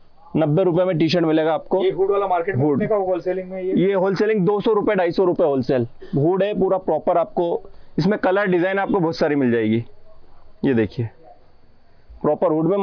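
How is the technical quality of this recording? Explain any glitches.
No technical faults are audible.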